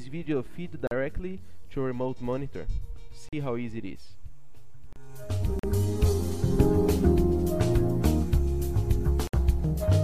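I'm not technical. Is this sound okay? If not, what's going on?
No. The wireless link likely had a Bluetooth dropout: bits of audio didn't reach the headphones in time and were thrown away. That leaves sudden silent gaps of about 40 ms at 0.87, 3.29 and 5.59 s, and about 60 ms at 9.27 s. The sound then picks up slightly further along.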